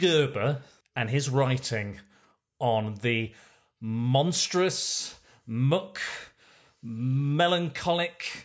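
A listener will hear no technical fault anywhere in this speech recording: the signal stays continuous and steady throughout, with nothing that points to a problem in how it was captured, processed or delivered.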